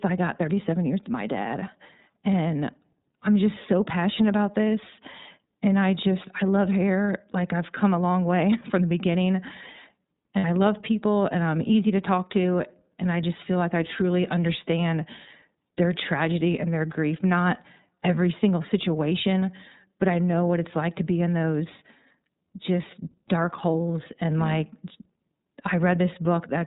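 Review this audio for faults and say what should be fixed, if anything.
Muffled, slightly rough and synthetic speech throughout, with nothing above 4 kHz, is the damage of the iLBC codec, a narrowband coder whose artefacts fit its 13.33 kbps, 30 ms-frame mode.

A brief held, buzzy vowel from 10.37 to 10.44 s (about 60 ms) is lost iLBC frames: the decoder repeated the last pitch cycle with noise, which fits two missing 30 ms frames.

Preventing both means using a wideband codec on a link with jitter buffering or forward error correction.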